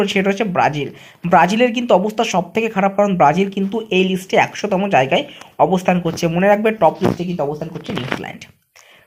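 Nothing is technically wrong with this audio.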